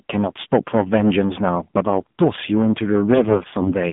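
Hard clipping runs through the whole clip. The signal was driven about 10 dB past what one stage could pass. Its peaks were sliced flat, and roughly 7 percent of the samples sit on that ceiling. The flat tops create harmonics high above the original sound. The result is a harsh fuzz on every loud syllable, not just an occasional crackle. Louder passages sound gritty and compressed at the top.

The AMR narrowband mobile codec also colours the entire clip. The sound is confined to a phone band of roughly 150 Hz to 3.6 kHz, so it is thin and boxy. Nothing bright remains above that. The codec rebuilds speech from a vocal tract model fed by sparse pulses. Here the damage is plainly audible: the voice is buzzy and synthetic. That level of coarseness points to a low mode, around 7.4 kbps.

From 3.14 s to 3.73 s, AMR bit errors take over. The link corrupted the weakly protected bits in the frames, at a rate near one bit in twenty. 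The core parameters still got through. As a result, pitch and loudness hold roughly steady. But the pulses land in the wrong places, and the gain and spectral detail drift. The speech turns hoarse, scratchy and gargly. About 28 frames in the damaged span were hit.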